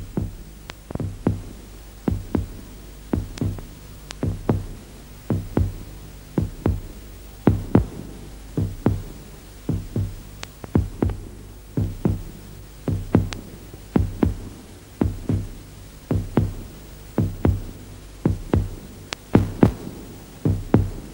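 From 19.06 to 19.98 s, a filter restarted on every block, losing its state each time; the resulting transients form a level-following buzz near 188 Hz, which fits 256-sample blocks.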